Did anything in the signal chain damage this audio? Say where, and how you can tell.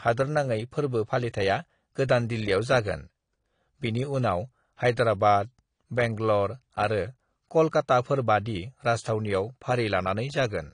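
Yes, at the codec stage: the speech is audibly dull and smeared throughout, with a spectrogram empty above 10 kHz, which fits likely AAC compression near 32 kbps lowering its cut-off.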